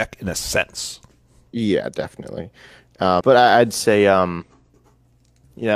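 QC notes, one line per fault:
1.49–1.54 s, 3.16–3.21 s and 4.37–4.44 s: compressed frames skipped. The sound jumps ahead right after "in a sense", just before "but I would say", and again just after it, losing roughly 150 to 200 ms each time. That fits three or four dropped frames of around 46 ms.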